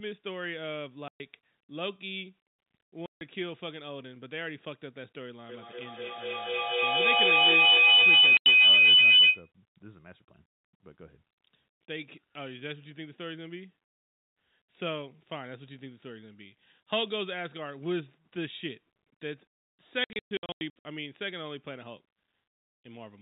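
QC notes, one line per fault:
1.08–1.20 s, 3.06–3.21 s, 8.37–8.46 s, 20.04–20.85 s: packet loss filled with silence. Gaps of 120, 150 and 90 ms, all multiples of 30 ms, which fits 30 ms packets. The last stretch scatters about 510 ms of holes, none longer than 120 ms. On the waveform these show as flat silent blocks with vertical edges, and on the spectrogram as blank columns.
5.49–9.52 s: feedback howl. A room loop re-amplifies its own output on each pass, narrowing to a tone of roughly 3 kHz that swells about 17 dB above the speech, with a loop delay of roughly 200 ms. The spectrogram shows a thick, bright horizontal line at that height. The waveform envelope balloons.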